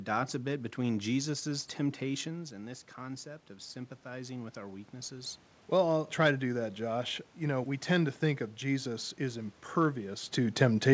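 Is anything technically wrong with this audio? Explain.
Yes. From 2.23 to 5.46 s there is automatic gain rising. Around 2.5 s the talker moves back and the level at the microphone drops by about 11 dB. The gain control responds by raising its gain by about 6 dB over three seconds, so the voice and the room noise swell together.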